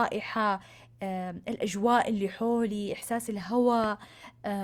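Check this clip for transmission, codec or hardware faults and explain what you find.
One hardware fault: a loud pop at 3.84 to 3.86 s, likely a voltage pulse from a plug, switch or static, peaking about 10 dB above the speech, which continues unbroken, unlike a dropout.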